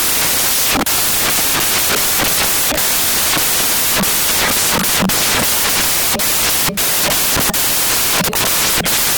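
It's a speech recording, but the whole thing comes through as loud, harsh broadband noise: the samples are built from the wrong bytes. The reader is misassembling each value, so the jittery low-order bits land in the high positions.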